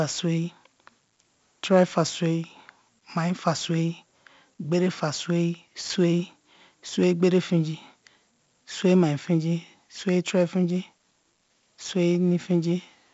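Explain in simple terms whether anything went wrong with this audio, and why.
The speech has heavy 4-bit ADPCM compression from start to finish. Storing sound as tiny steps adds gritty hiss to loud parts and leaves it dull.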